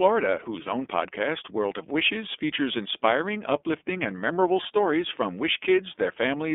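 The whole recording has passed through the iLBC codec, a narrowband VoIP coder that encodes each 30 ms frame on its own. The line band runs from 250 Hz to 3.5 kHz, so low body and upper brightness are gone. The coding damage is plainly audible: the speech sounds slightly rough and synthetic, which fits the 13.33 kbps mode used with 30 ms frames.

From 0.62 to 0.66 s, just before "own podcast", there are lost iLBC frames. A packet went missing and the decoder filled the 30 ms gap by repeating the last pitch cycle mixed with noise, which fits a single lost frame. It sounds like a brief held, faintly buzzy vowel. Because each iLBC frame decodes independently, the speech recovers immediately afterwards.

From 2.71 to 2.76 s, just before "inspiring uplifting and memorable", there is a wireless microphone noise hit. The FM radio link from the microphone dipped as reflected signals cancelled at the receiver, and receiver noise rose over the audio for about 50 ms. 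It sounds like a short swish of static cutting across the speech and then vanishing as the signal returns.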